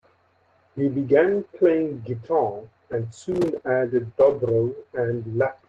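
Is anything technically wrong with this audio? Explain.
Yes, there are two kinds of trouble in this speech clip, which came through an Opus call at 24 kbps with the top end stopping around 12 kHz.

Lost packet rebuilt from error correction, at 2.55 to 2.57 s and again at 4.25 to 4.39 s: a packet went missing the first time, several separate ones the second, and the decoder filled in 20 ms and then 80 ms from the lower-bitrate backup copies. So there's no dropout, just brief rougher, noisier patches.

Processor overload crackle, from 3.32 to 3.62 s: the machine couldn't keep up with its tiny audio buffers, a few milliseconds each, and missed about 15 of them over that stretch. Each miss leaves a hard-edged silent gap, and together they sound like a gritty crackle over the speech.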